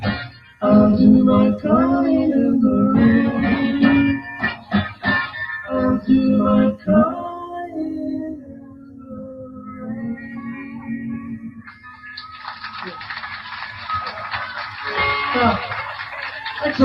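The audio has a noise suppressor applied to music or sounds. It is a suppressor tuned for speech. It treats steady, sustained parts of this sound as noise and pulls them down. Onsets mostly pass, but held tones and decays sink. The gain moves by around 15 dB across the clip. The result is a pumping, unsteady level and thinned-out sustains.

There are four spots of sound cut by the noise suppressor. From 0.0 to 0.62 s the level drops by about 14 dB. Between 4.19 and 4.73 s it dips by about 11 dB. From 4.89 to 5.05 s it falls by about 12 dB. The longest cut runs from 8.25 to 12.04 s, with drops reaching about 15 dB. In each case the sustained material fades away while sharper sounds survive.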